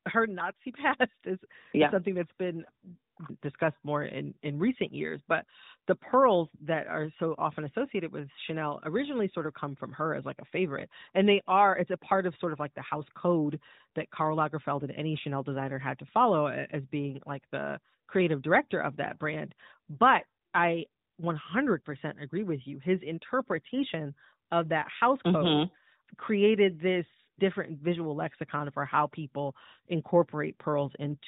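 No technical faults detected.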